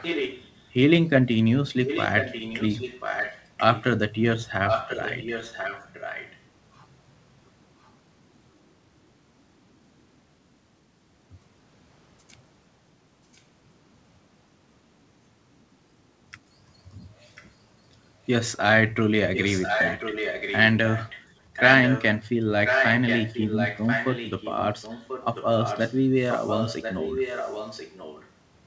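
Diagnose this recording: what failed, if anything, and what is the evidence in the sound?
Echo leak at 0.0–0.68, 1.85–3.84, 4.66–6.4, 7.83–7.89, 13.33–13.41, 17.35–17.47, 19.34–22.04 and 22.65–28.3 s. A copy of the speech returns 1.04 s late. It is strong in the long stretches and faint in the brief scraps. Call processing failed: a far-end echo canceller likely let loudspeaker pickup through.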